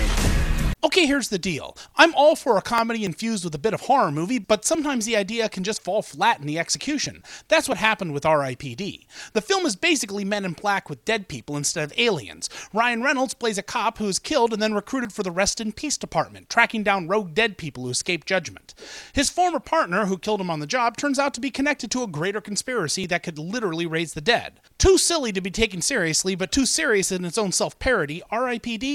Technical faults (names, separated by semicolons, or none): overlap between stream segments; audio missing between chunks